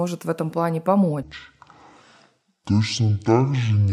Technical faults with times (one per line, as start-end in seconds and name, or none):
1.22-3.93 section at the wrong speed